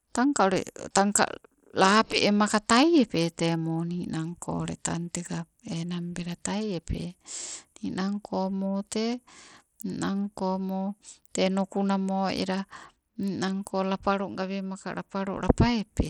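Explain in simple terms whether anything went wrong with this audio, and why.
Something went wrong: the speech was likely squeezed through Bluetooth SBC compression, a basic wireless codec that spends too few bits on the highest frequencies. Across the whole recording the treble flickers or drops away, and a gritty, grainy noise clings to the voice.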